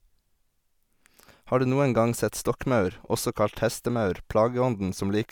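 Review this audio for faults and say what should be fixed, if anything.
Nothing stood out on listening to this speech recording, so there is nothing here that needs fixing.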